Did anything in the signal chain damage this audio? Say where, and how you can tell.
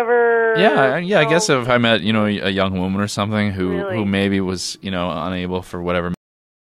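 Yes, a cut-off end at the driver or buffer stage: at 6.14 s the sound stops mid-event and drops straight to digital silence with no decay. On a waveform it is a flat line right after ongoing signal; a spectrogram shows energy ending on a hard vertical edge. The final buffers were never written.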